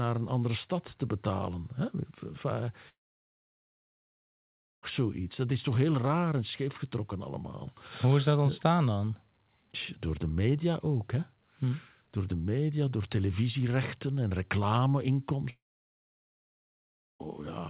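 Speech cuts out twice, from 2.89 to 4.84 s and from 15.50 to 17.21 s. Each gap starts with a brief fading buzz, then about 1.6 to 1.9 seconds of near-silence before the audio resumes with that stretch lost, likely a long network dropout. The narrowband call sound stops at 4 kHz.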